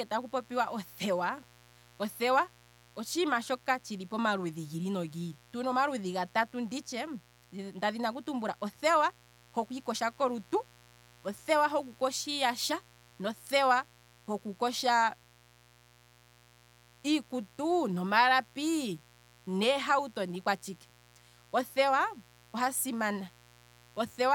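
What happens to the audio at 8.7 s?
At 8.7 s the speech carries a mains buzz, present from start to finish rather than just at that moment. Switching spikes at twice the 60 Hz cycle spread harmonics into the kilohertz range, giving a raspy edge around 30 dB below the speech, unlike a smooth, low hum.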